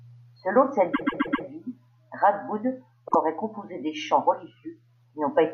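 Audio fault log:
0.93–1.45 s, repeated frames. A 130.6 ms block of sound plays four extra times, heard as a stutter that adds 0.52 s.
3.07–3.15 s, repeated frames. A 52.2 ms block replays once, a brief stutter.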